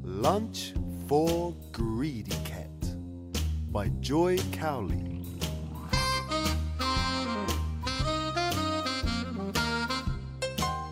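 Nothing is technically wrong with this audio clip, as no faults can be heard anywhere in it.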